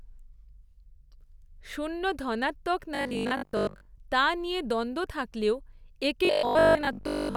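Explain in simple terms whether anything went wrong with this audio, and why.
Two stretches of the speech turn into a rigid, metallic buzz: from 2.95 to 3.87 s, right after "শূন্য ধনাত্মক", and from 6.25 to 7.35 s, after "নিয়ে দ্বন্দ্ব থাকলেও একে". This is robotic sound from repeated short buffers. The likely cause is audio arriving too late, so the playback software kept replaying a 20 ms slice for most of each stretch, which imposes a steady 50 Hz buzz.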